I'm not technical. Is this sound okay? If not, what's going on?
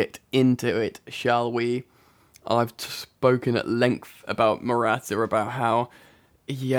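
No, there's one small glitch. At 5.77 s you'll hear a single sharp click in the speech. That's dropped samples: the recording is made of thousands of tiny snapshots per second, and here a couple of them likely went missing, a tiny fraction of a millisecond. Nothing you'd notice as missing sound, but the waveform suddenly jumps to a later point instead of flowing smoothly, and your ear catches that jump as a click.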